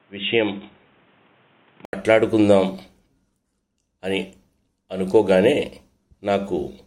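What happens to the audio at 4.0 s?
Nothing goes wrong at 4.0 s; the audio plays through that moment intact, with no dropout, click or other disturbance.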